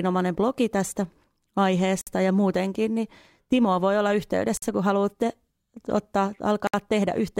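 At 2.01 s, 4.57 s and 6.67 s the speech drops into short silences of about 57, 49 and 64 ms, with smeared edges. That's a gap at a join of encoded pieces: separately encoded chunks were stitched together with their start delay and end padding left in. The second falls right after "voi olla", the third right after "kun haluatte ottaa".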